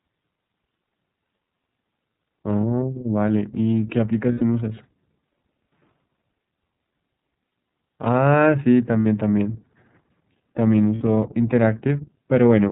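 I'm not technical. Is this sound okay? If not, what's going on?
No. The whole recording has passed through the iLBC codec, a phone-style voice compressor that discards everything above 4 kHz. Speech stays understandable but sounds narrow, slightly rough and synthetic, as on an internet call.

There are also lost iLBC frames: chunks of audio went missing and the decoder filled each gap with a held, faintly buzzy or breathy sound. This happens at 2.61 s (30 ms), 4.32 to 4.41 s (90 ms), 9.01 to 9.06 s and 10.95 to 11.02 s (60 ms each), with speech recovering right after.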